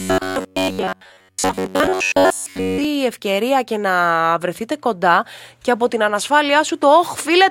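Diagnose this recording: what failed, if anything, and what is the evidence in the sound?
From 0.01 s to 2.85 s the speech turns into a rigid, metallic buzz pitched near 93.8 Hz. It still loosely tracks the syllables, then clears just before "ευκαιρία και". This is robotic sound from repeated short buffers, likely a driver or buffer underrun. Fresh audio arrived too slowly, so a segment of roughly 10.7 ms was replayed for most of that stretch while real audio was skipped. That fixed repeat period imposes the steady buzz.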